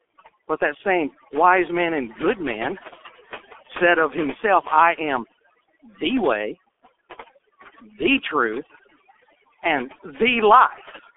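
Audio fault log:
throughout, overdone noise removal: A noise reducer set far too strong mutes frequency bands near its noise estimate, leaving a lowered background with twinkling specks and quiet parts of the voice cut away.
throughout, G.723.1 codec: Speech squeezed through this 6.3 kbit/s telephony codec within a 300 Hz to 3.4 kHz band loses everything above 3.5 kHz, sounding muffled and hoarse with blurred consonants.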